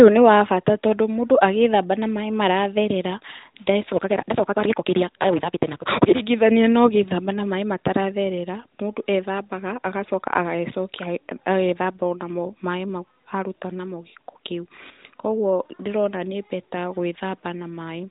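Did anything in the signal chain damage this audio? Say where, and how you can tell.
Yes. From 3.94 to 6.22 s the speech races at about 1.88 times normal speed while the timbre stays, with a 172 Hz buzz. That is a block size mismatch (truncated) at the buffer stage. Each block's tail is dropped, which fits a 256-sample read.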